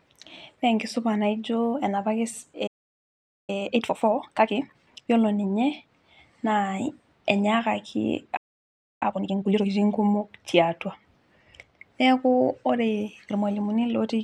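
From 2.67 to 3.50 s the player likely ran dry of data, a playback stall: the speech cuts to silence for about 0.81 s mid-flow. From 3.50 to 5.12 s time-compressed catch-up trims the backlog by splicing out small pieces, so the speech runs 1.5 times fast at normal pitch. A second stall from 8.36 to 9.03 s silences it for about 0.65 s, and catch-up from 9.03 to 9.67 s then rushes it at double speed.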